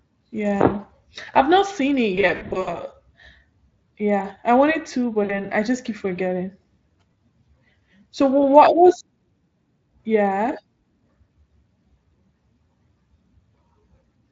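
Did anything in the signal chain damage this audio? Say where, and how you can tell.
Yes, at the network stage, with VoIP packet loss concealed by the speech codec. After "I've not seen it", from 2.15 to 2.79 s, the sound goes buzzy and smeared in patches, about 260 ms lost in runs of up to 60 ms. Between "yeah I wanted to" and "I just keep forgetting" (5.23–5.35 s) there's a 60 ms stretched, fading tone, plus a blip at 7.14 s. The Speex decoder extrapolates its last pitch and filter, so the sound stays weak briefly afterwards.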